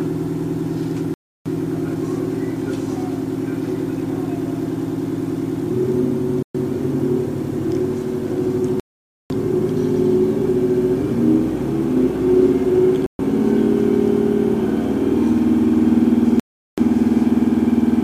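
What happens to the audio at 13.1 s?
At 13.06 s the sound cuts to silence for about 130 ms, resuming at 13.19 s. This is likely a Bluetooth stall: interference delayed packets, the headphones' buffer emptied and playback halted until the retransmitted data arrived. What separates it from packet-loss concealment or a codec dropout is the clean gap itself. Nothing is smeared, repeated or synthesised to cover the missing span; the audio simply stops, then continues.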